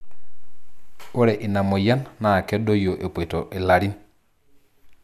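No faults are present in this recording.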